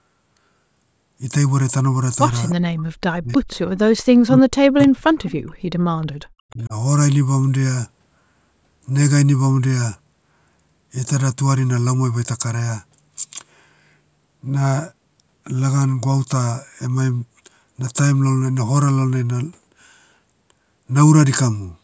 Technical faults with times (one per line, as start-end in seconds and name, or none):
2.49-2.55 echo leak
2.69-3.42 speech suppressed in double talk
3.32-3.78 echo leak
4.02-5.60 speech suppressed in double talk
4.82-4.87 echo leak
5.25-5.31 echo leak
6.07-6.19 background gated by the echo canceller
6.47-6.73 speech suppressed in double talk